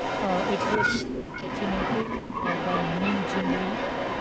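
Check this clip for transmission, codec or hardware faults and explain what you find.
Two faults are present, both tied to echo control on a call.

Echo leak runs from 0.0 to 4.2 s. A delayed copy of the speech trails it by about 355 ms, at roughly the same level. The likely cause is a loudspeaker echo that the canceller failed to remove.

Speech suppressed in double talk occurs at 0.90–0.96, 1.34–1.48, 2.05–2.11 and 2.37–2.44 s. The speech briefly dips, by around 10, 15, 5 and 5 dB. The likely cause is the canceller turning down overlapping talk.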